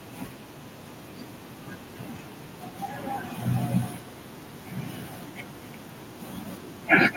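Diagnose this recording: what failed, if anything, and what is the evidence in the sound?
What failed is call processing, specifically an echo with no canceller. All through the speech there's a trailing copy arriving roughly a fifth of a second behind each phrase, sitting about 17 dB under the direct sound and coming back thinner. That's the far end's loudspeaker being picked up by its own microphone and sent straight back over the network, with nothing on that side subtracting the returned signal before it's transmitted.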